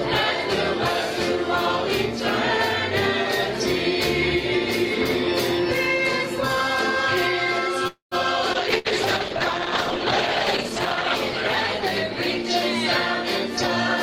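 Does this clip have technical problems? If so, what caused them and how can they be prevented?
Yes. From 7.87 to 8.14 s there is a call audio freeze. Packets were likely held up in transit, so the jitter buffer ran dry. The receiver stretched the last sound into a fading buzz or hiss for about 240 ms, including about 120 ms of silence, then resumed where it stopped with nothing lost. A larger adaptive jitter buffer or a steadier network path prevents this.

At 8.53 to 8.57 s there is a skip ahead. Once the delayed audio arrived, the jitter buffer discarded roughly 100 ms to catch up. Playback jumps forward across a gap of only about 10 ms, and that stretch of sound is simply missing. Smoother buffer catch-up, such as gradual time-compression instead of dropping audio, prevents this.

A call bitrate drop runs from 8.54 to 13.2 s. The bandwidth estimate fell and the encoder went from 32 to 11 kbps, holding its lowest rate for about 2.4 s. 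At that rate the sound turns rough and dull, with the high frequencies cut off. Better bandwidth estimation and more reserve capacity on the link prevent this.

A burst of packet loss spans 8.78 to 8.88 s. Around 60 ms of consecutive packets were lost or arrived too late. The receiver filled the gap by holding the last sound as a brief fading buzz or hiss, then resumed further on with that audio gone. Forward error correction or redundant packets prevent this.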